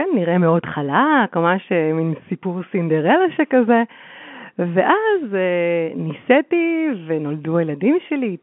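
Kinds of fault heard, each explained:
No faults are heard.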